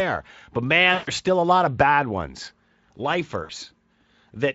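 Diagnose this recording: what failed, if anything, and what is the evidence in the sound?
VoIP packet loss concealed by the speech codec (network) at 0.93–1.10 s and 3.43–3.51 s: extrapolated pitch and filter stretch into a buzzy tone or coloured noise that fades, unlike a buffer dropout's silent gap or click.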